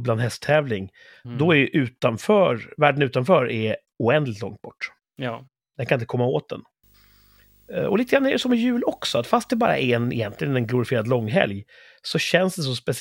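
From 6.83 s to 11.32 s, just after "inte komma åt den", the speech picks up video or display buzz: interference from a screen or video cable leaking into the audio path. It sounds like a rasping 50 Hz buzz with hiss-like hash above it, roughly 35 dB below the speech, plus a whine at 15.6 kHz from the line scan. A spectrogram shows a 50 Hz harmonic comb and a thin steady line at 15.6 kHz.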